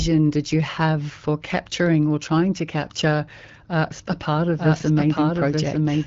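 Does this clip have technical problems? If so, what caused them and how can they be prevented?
Yes. A doubled audio track, likely from a second, slower capture path or an out-of-step edit, plays the speech again about a second late and nearly as loud, from 4.58 s to the end. Route each source through a single path and check edit alignment so only one copy reaches the mix.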